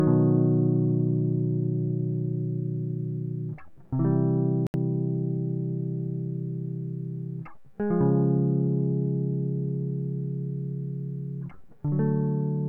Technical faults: Bluetooth dropout

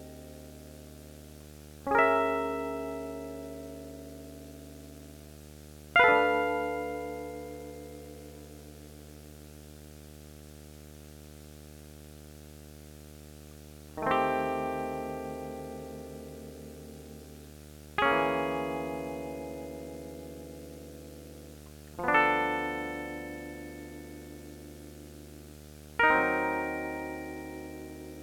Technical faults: video or display buzz

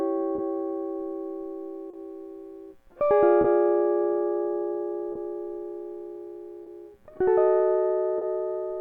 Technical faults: clock drift between sender and receiver; short stall from a late packet

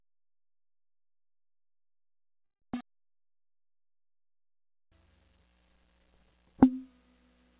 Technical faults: call audio freeze

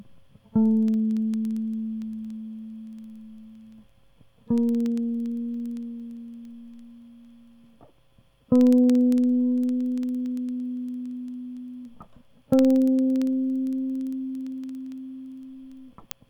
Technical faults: word clock ticks

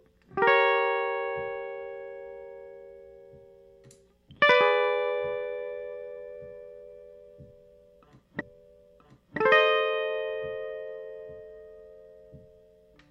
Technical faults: stream segment repeated

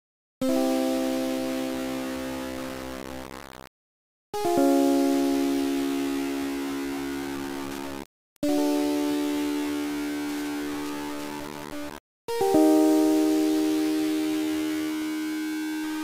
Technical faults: low bit depth without dither; Wi-Fi interference

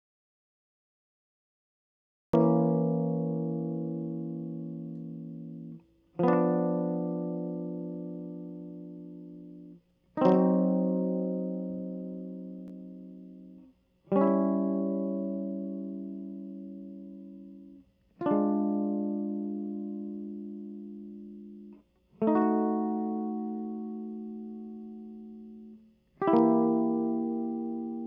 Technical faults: audio dropout to silence

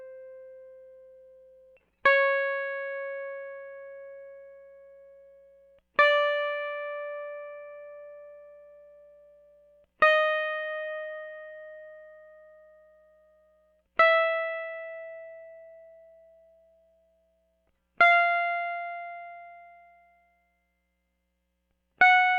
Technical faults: none

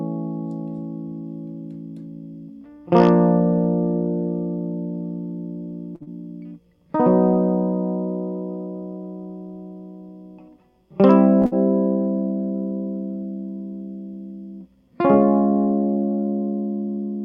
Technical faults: short stall from a late packet; short concealed packet loss; burst of packet loss

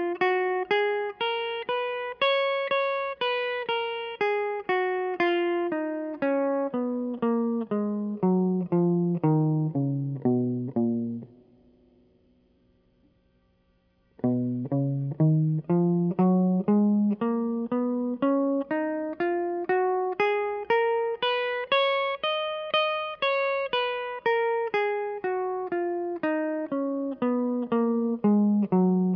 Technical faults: none

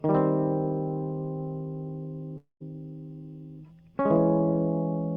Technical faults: long network dropout

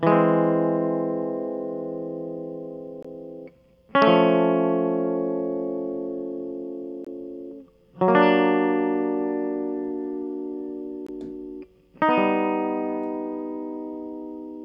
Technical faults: gap between chunks

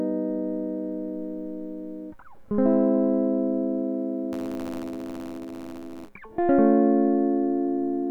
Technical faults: buffer tearing

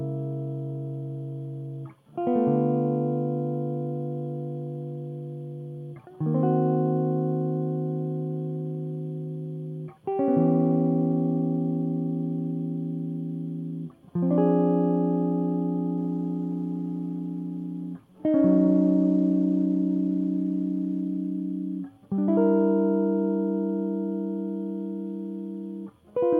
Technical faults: call bitrate drop

